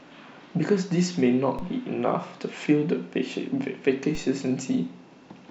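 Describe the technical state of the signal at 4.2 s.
A DC step at 4.15 s shifts the zero line by about -26 dBFS, then bleeds away through a 5 Hz high-pass, giving a low thump under the continuing speech.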